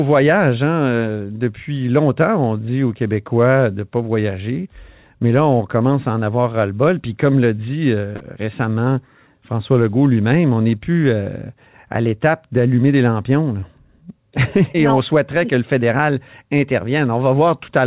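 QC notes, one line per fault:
8.16–8.22 s, 13.60–13.64 s and 14.72–14.76 s, short concealed packet loss: 40, 20 and 20 ms of audio arrived too late, so the receiver extended the preceding sound and crossfaded back. Each gap is a brief smear or wobble, after "comme l'a dit euh" and "l'étape d'allumer des lampions", and just before "on souhaiterait que le".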